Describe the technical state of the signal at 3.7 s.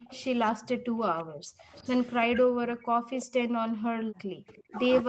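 At 3.7 s the background is gated by the echo canceller, a state that runs from 2.85 s to the end of the clip. While the far-end loudspeaker was active, the canceller judged the microphone signal to be echo and pulled its gain down hard, by about 40 dB at the deepest point. The room sound behind the speech dips or drops out. The band still stops at 8 kHz, as expected from the call path.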